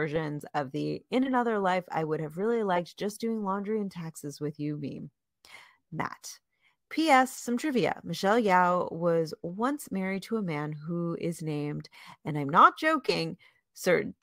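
A speech recording with no technical faults to report. Nothing in it calls for a time stamp or an explanation of cause.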